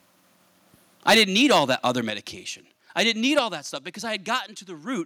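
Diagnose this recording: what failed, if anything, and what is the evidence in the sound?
Microphone overload shows up first from 1.08 to 1.88 s, peaks about 13 dB over full scale with flattened tops and a crackly edge. It returns at 2.99 to 3.10 s (about 4 dB over) and 3.37 to 3.39 s. The likely cause is converter-stage clipping.

The microphone volume steps down in clean single jumps at 1.10 s (about 3 dB), 2.10 s (about 6 dB) and 3.39 s (about 5 dB), right before "that stuff because". Each one drops the voice and background together, likely call processing cutting device input gain after overload.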